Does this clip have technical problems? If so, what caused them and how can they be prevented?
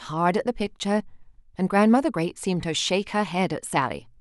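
No, the speech signal shows no technical faults at any point, so there is nothing to trace to a cause or guard against.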